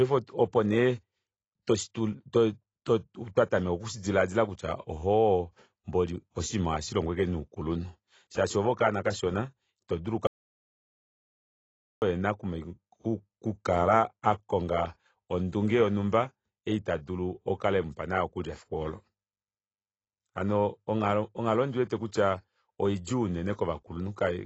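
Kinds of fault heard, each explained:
AAC compression, throughout: The speech is dull and smeared, with a plainly audible warbling, fizzy texture and nothing above 8 kHz. Likely lossy AAC-LC coding at a low bitrate near 24 kbps, which forces a lowered cut-off and coarse spectral quantisation.
Audio dropout to silence, 10.27 to 12.02 s: Right after "oove okanona kashona itodulu" the sound cuts to silence, with no room tone, for about 1.75 s. This is likely a lost input while recording continued writing silence, so that stretch is gone.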